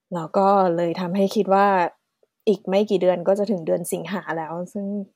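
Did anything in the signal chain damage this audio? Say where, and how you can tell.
No, no damage is audible.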